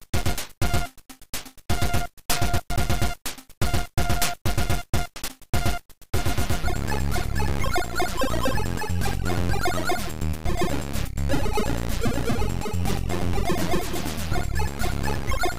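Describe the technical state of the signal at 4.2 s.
At 4.2 s the signal is intact, with no audible fault at that point.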